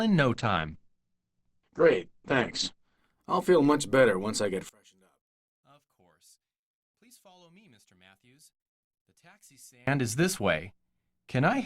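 A call bitrate drop runs from 0.35 s to 3.05 s. The bandwidth estimate collapsed and the encoder went from 64 kbps to 11 kbps, sitting at that floor for about 2.6 s. At that rate the codec spends far fewer bits per frame, so the sound turns coarse and watery, and the top end is trimmed from 20 kHz down to 8 kHz, leaving it dull and muffled until the rate climbs back.

From 4.69 s to 9.87 s the level falls by about 31 dB, leaving only a faint residue of the sound. This points to one channel inverted, most likely a stereo channel with its polarity flipped, so that when the pair is folded to mono everything shared by both sides cancels. What remains is just the small difference between the channels, which is why the sound, background included, nearly disappears for those five seconds.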